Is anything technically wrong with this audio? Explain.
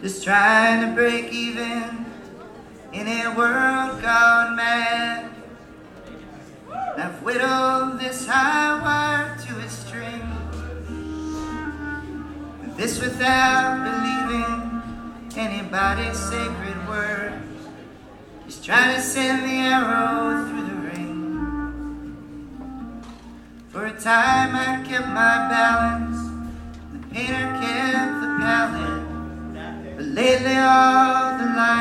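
No, nothing technically wrong stood out on listening.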